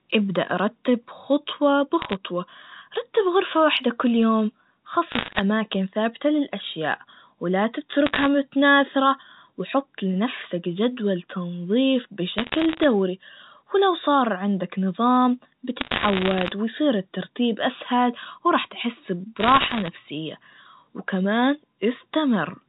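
Bit errors on the digital phone line flip individual bits in the 64 kbps G.711 stream, corrupting single samples at rates of roughly 0.5 to 1.5 percent. Hits on high bits, or on the sign of loud samples, throw samples far off, so bursts of sharp ticking crackle sit over the unchanged speech at 2.02–2.15, 5.12–5.40, 8.06–8.27, 12.38–12.84, 15.80–16.52 and 19.40–19.88 s.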